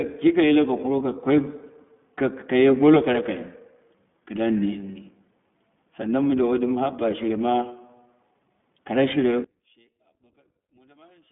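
Speech heard through the iLBC codec, with a sudden collapse near the end. From start to finish nothing above about 3.8 kHz survives, and the useful band sits roughly between 150 Hz and 3.5 kHz, as on a telephone line. Unlike a simple low-pass filter, the voice also has a slightly rough, synthetic grain, because each 20 ms frame is coded on its own. That texture fits the 15.2 kbps mode of iLBC. At 9.44 s, just after "kara shire", the sound drops by about 25 dB and stays down to the end at 11.31 s. The likely cause is one channel inverted, so that summing to mono cancels everything the two channels share. This is not a dropout or a fade, because a faint residue remains instead of silence. It is also not a plain volume cut, since the body and low end of the voice vanish while only the small difference between the channels leaks through.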